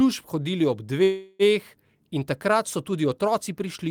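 At 1.03 s the speech stalls in a call audio freeze until 1.42 s: the last sound is stretched into a fading buzz or hiss for 0.36 s, likely because delayed packets emptied the jitter buffer. Unlike a dropout, nothing is lost; the speech resumes exactly where it stopped, just 0.36 s late.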